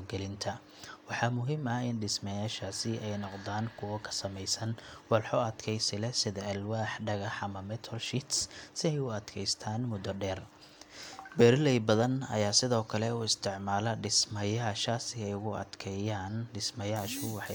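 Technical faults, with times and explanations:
No technical faults are audible in this speech.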